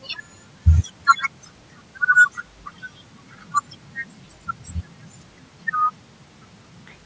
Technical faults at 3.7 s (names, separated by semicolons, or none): none